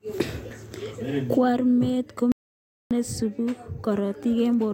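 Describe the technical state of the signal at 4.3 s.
At 4.3 s the signal is intact, with no audible dropout, distortion, clipping or other fault at that point.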